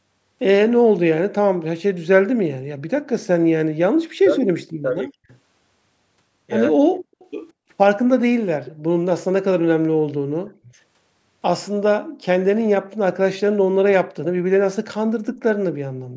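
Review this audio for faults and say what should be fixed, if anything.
The room background is gated by the echo canceller from 2.5 to 2.68 s. It falls by about 40 dB for roughly 150 ms, then returns. The canceller clamped the microphone hard while the far end played. Softer suppression with comfort noise would prevent this.

Speech is suppressed in double talk at 3.87–4.01, 4.20–4.55, 4.82–5.31, 6.73–6.99 and 10.42–10.71 s. The talker dips by around 40 dB in chunks. The likely cause is the canceller mistaking near speech for echo while both sides talked. Better double-talk detection would prevent it.

An echo leak appears at 7.19–7.29 s and 8.65–8.72 s. A faint delayed copy returns about 200 ms late, the second slightly later at 205 ms. The first sits roughly 30 dB below the speech, the second roughly 20 dB below. This is likely loudspeaker pickup that the far-end canceller missed. Using a headset or improving echo cancellation would prevent it.

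The call's high-pass filtering and the band limit at 8 kHz are normal.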